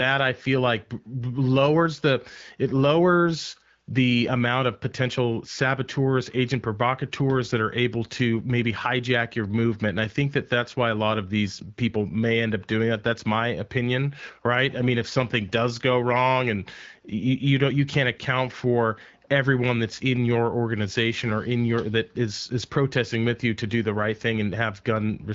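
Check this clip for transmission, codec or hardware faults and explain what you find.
No transmission, codec or hardware fault is audible; the speech carries the band-limited character of an AMR wideband (HD Voice) link at 12.65 kbit/s, with light coding texture and no content above about 7.5 kHz.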